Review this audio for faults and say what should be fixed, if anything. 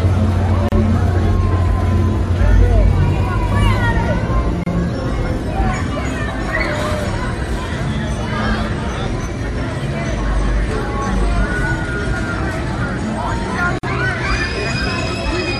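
There's a gap at a join of encoded pieces three times: short dropouts at 0.69 s (about 34 ms), 4.64 s (29 ms) and 13.79 s (47 ms). Separately encoded chunks were butted together with their encoder delay and end padding left in. Trim that priming and padding, or encode continuously.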